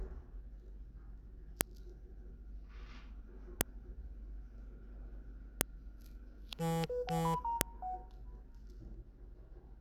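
Sounds, interrupted by sharp, loud clicks at 1.61, 3.61, 5.61 and 7.61 s, spaced exactly 2 s apart. This is a file header played as audio: the clip was assembled from 2 s WAV pieces whose header bytes were decoded as samples, snapping regardless of content.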